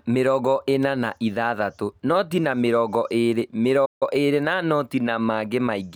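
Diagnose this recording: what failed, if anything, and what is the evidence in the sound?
Playback stall from 3.85 to 4.03 s: speech drops to silence for 155 ms, then resumes, likely because the player's buffer ran dry or its thread blocked.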